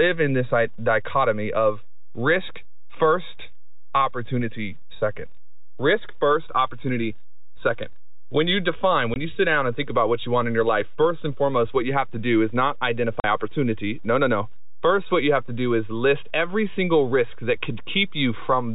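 A speech recording over telephone-band audio, consistent with G.711 A-law coding at 64 kbps, carries a DC offset from start to finish: the whole waveform sits displaced from zero by a fixed amount. Unlike mains hum or rumble, it has no pitch and no audible sound. It appears only as constant energy at 0 Hz and lost headroom on one side. Packet loss filled with silence cuts the speech twice, at 9.14 to 9.16 s and at 13.2 to 13.24 s. These holes last 20 ms and 40 ms, which points to one and then two consecutive 20 ms packets going missing. What separates this from a recording dropout or a fade is the dead digital silence with abrupt edges, and gap lengths that are exact multiples of one packet.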